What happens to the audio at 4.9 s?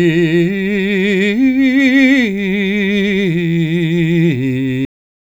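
The music stops abruptly at 4.85 s, a cut-off end: the final buffers were never written or played, so the sound drops straight to digital silence without any decay.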